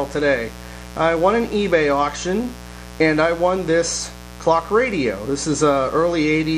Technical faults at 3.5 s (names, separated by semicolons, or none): mains buzz